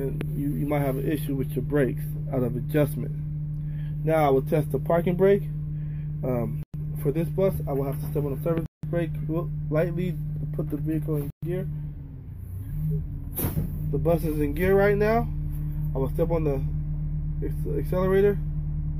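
The audio cuts to silence three times. The gaps run from 6.63 to 6.74 s, 8.66 to 8.83 s, and 11.30 to 11.43 s. They last 109 ms, 172 ms and 124 ms. The longest is the second. Each dropout is clean, with sound resuming right after. The likely cause is a Bluetooth stall. Interference delayed packets, so the headphone buffer emptied and playback paused until resent data arrived.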